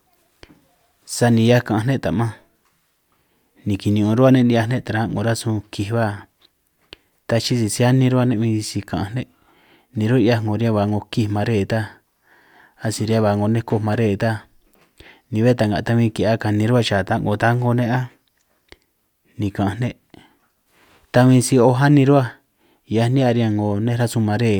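Listening to the speech recording closely, nothing stood out as a technical problem.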